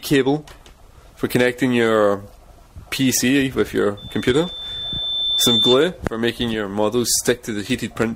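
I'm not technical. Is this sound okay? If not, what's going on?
No. From 3.97 to 5.89 seconds there is a loudspeaker feedback squeal. A microphone is picking up the speaker it feeds. That sound goes back into the microphone, gets louder, and loops round again. One pitch wins out, here a high whistle near 3.5 kHz. It swells over about a second and a half until it is louder than the rest of the sound.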